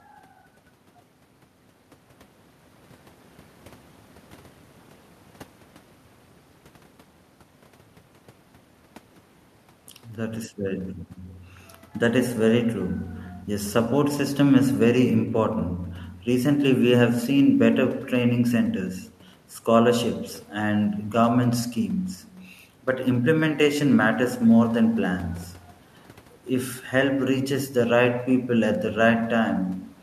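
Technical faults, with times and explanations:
No technical faults detected in this speech recording.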